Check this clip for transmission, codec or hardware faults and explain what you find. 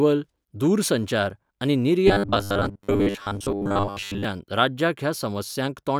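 One fault is present. From 2.08 to 4.25 s, the speech shows robotic sound from repeated short buffers. New audio likely arrived too seldom, so the last short chunk was replayed to fill each gap. Most of the real audio there is skipped. The repeats impose a fixed 100 Hz buzz, which fits a 10 ms buffer. The voice becomes a rigid, metallic buzz that only loosely follows the words.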